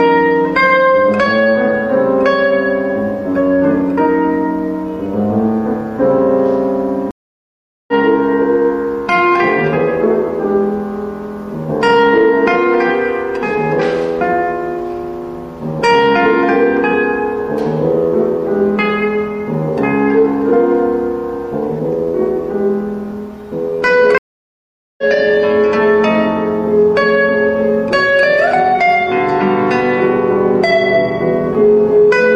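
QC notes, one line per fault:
7.11–7.94 s and 24.18–25.04 s, stream reconnect: the audio falls silent for about 0.77 s and then 0.80 s. When the connection comes back, a fresh decoder starts mid-stream and the sound resumes roughly 0.5 s and then 0.4 s ahead of where it stopped, with a brief muted or faded first frame. That forward jump sets it apart from a buffer underrun, which resumes exactly where it paused, and from a dropout, where the gap simply replaces the missing audio.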